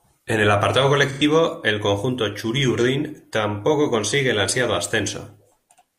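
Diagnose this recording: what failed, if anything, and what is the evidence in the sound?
Codec stage: AAC frame loss with concealment just after "el apartado", 1.12 to 1.22 s. The decoder filled the gap from the last good spectrum, leaving a smeared, noisy patch that fits two lost frames.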